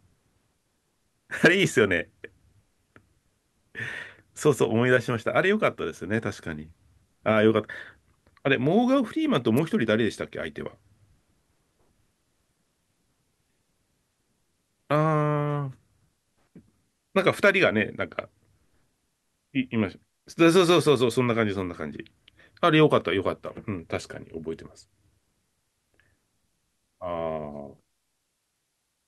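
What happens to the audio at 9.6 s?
At 9.57 s a sharp snap lands on top of the speech, peaking somewhere around -20 dBFS and gone within a couple of hundredths of a second. This is an electrical switching spike, likely from a nearby switch or motor arcing and the audio line picking up that burst of interference.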